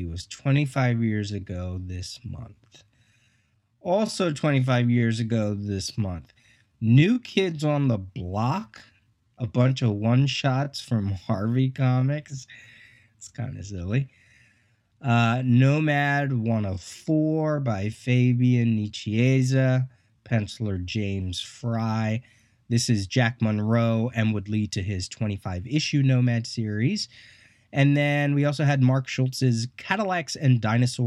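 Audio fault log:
0.0–21.74 s, time-stretched section: speech plays at 0.70 times normal pace with pitch unchanged, sounding dragged as short pieces are repeated, then abruptly returns to normal pace at 21.74 s; likely software stretching audio to fill a longer duration.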